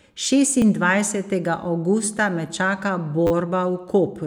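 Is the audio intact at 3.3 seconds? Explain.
No, a repeated buffer runs from 3.27 to 3.31 s, right after "me čaka". Fresh audio arrived late, so the device replayed its last roughly 10 ms buffer four more times, producing a brief buzzy stutter with hard joins. Almost nothing appears to be lost.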